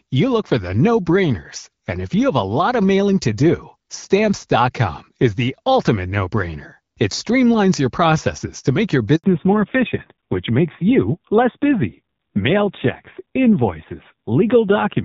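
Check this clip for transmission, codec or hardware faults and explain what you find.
Two transmission faults are audible, both around the same moment in the call.

Handover gap, 9.16 to 9.24 s: right after "processes to make your", the call switches networks and no speech frames arrive for about 80 ms. The sound cuts off quickly and stays silent until the new link delivers audio, so that stretch is lost.

Fallback to narrowband, 9.24 s to the end: after the handover, the call drops from HD Voice, whose light coding before this point fits AMR-WB at 12.65 kbit/s, to an older narrowband codec. Nothing above 4 kHz remains, and the speech becomes duller and rougher, which fits AMR-NB at 5.9 kbit/s.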